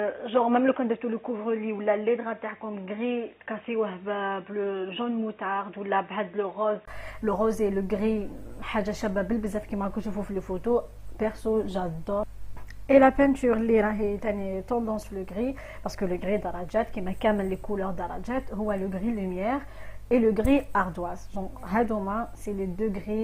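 From the start until about 6.88 s the sound is dull and boxy, with nothing above 3.8 kHz, sits roughly 5 dB quieter, and carries a faint background noise of its own. At 6.88 s a brief gap of about 20 ms breaks the audio, and the full, brighter band returns. This points to an input switched to a poorer device, likely a second microphone or a headset call profile, before the recording moved back to the better input.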